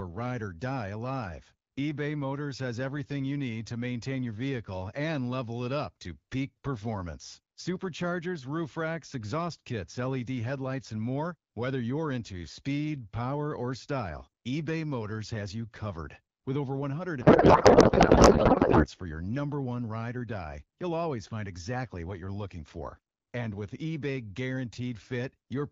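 From 17.21 to 18.88 s the speech gives way to garbled noise and warble that barely tracks it, ending just before "for your number one". This is a codec payload misread: the AMR-WB decoder takes in frames that look valid but has the field boundaries wrong, which fits octet-aligned packing being parsed as bandwidth-efficient. The decoded parameters are therefore nonsense. Clear wideband speech, consistent with 12.65 kbit/s, is heard again once both ends agree on the format.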